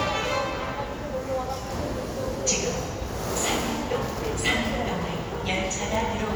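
Nothing technical stands out in this recording of sounds, so there's really nothing here to flag.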